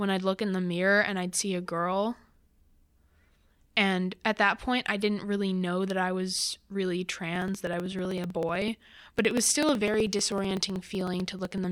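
Periodic USB or driver dropouts run through this speech clip from 7.36 s, just after "that I was really", to 11.64 s. Every 63 ms, a sliver of roughly a millisecond of audio is skipped outright rather than filled with silence. That points to a background task stalling the USB bus or audio driver on a fixed cycle. Around seventy of these losses land as a steady train of ticks riding on the speech.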